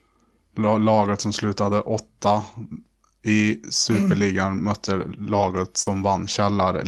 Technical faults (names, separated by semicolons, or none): lost packet rebuilt from error correction; short concealed packet loss